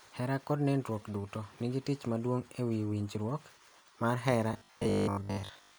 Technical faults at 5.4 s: robotic sound from repeated short buffers

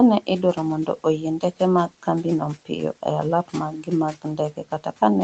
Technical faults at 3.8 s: speech cut by the noise suppressor

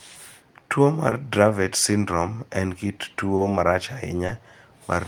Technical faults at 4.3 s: clock drift between sender and receiver; short stall from a late packet

